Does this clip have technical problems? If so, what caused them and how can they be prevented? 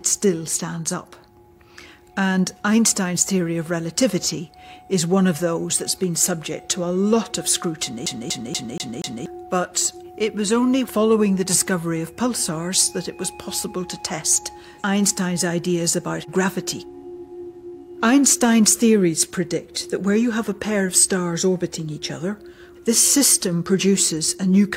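Yes. From 8.06 to 9.26 s the clip has a CD stuck on one turn: a scratch or smudge on the disc keeps throwing the laser back one track at the same point of each rotation, so the player rereads the same stretch. The result is a single 0.24 s fragment of audio repeating five times, each pass separated by a brief mute at the jump, which gives the quick, perfectly regular stutter of a skipping disc. To prevent it, clean or resurface the disc, or rip it with an error-correcting ripper before playback.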